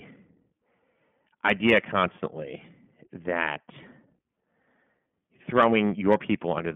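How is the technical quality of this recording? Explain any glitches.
The recording is held back by narrowband codec coding throughout. The iLBC codec is audible across the whole clip: each short frame, consistent with 20 ms blocks at roughly 15 kbps, is coded independently. Nothing passes above 3.6 kHz, so the speech sounds band-limited, slightly rough and synthetic.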